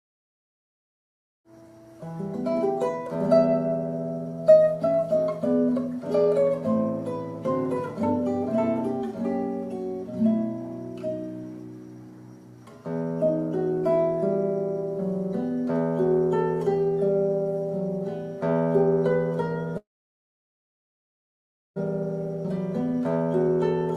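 Packets were likely held up in transit at 19.77 s, leaving the jitter buffer empty until 21.78 s: a call audio freeze. The receiver briefly extended the last sound before falling silent for about 1.9 s, then resumed where it stopped, inserting roughly a two-second gap without losing audio. From 22.50 to 23.49 s, the receiver drained extra buffered delay by trimming short pitch-period pieces in quick succession, a jitter buffer speed-up. About a tenth of a second was removed, so the sound runs roughly 11 percent faster at unchanged pitch and comes across as hurried.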